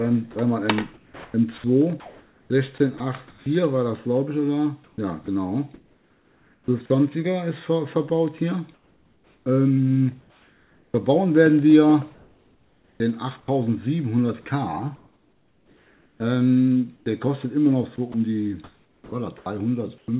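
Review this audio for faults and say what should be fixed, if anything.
Sound chopped by the voice detector: the audio turns choppy, its edges clipped, at 0.32–3.46, 4.84–6.9, 12.14–13.48, 14.42–17.06 and 17.96–20.08 s. Between 0.7 and 1.4 s of each stretch is swapped for fill, likely from the sender's voice detector repeatedly gating transmission on and off.

Comfort noise in place of the background: from 8.74 to 10.94 s the real background gives way to a flat, featureless hiss for about 1.5 s, likely discontinuous transmission with receiver-generated comfort noise filling the pause.

To prevent both, disable discontinuous transmission and voice-activity gating on the sending side, or at least relax its detection threshold.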